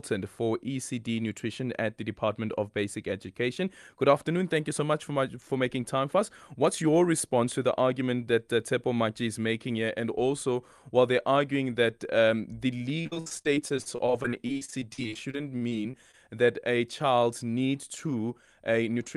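From 13.01 to 16.50 s, after "arguing that um the", repeated packet loss makes the speech choppy and robotic. Gaps of up to 60 ms are patched by stretching the previous sound, unlike a single clean dropout. From 18.60 to 19.13 s, a jitter buffer speed-up trims about 70 ms of pitch periods, so the speech hurries at 110% without its pitch rising.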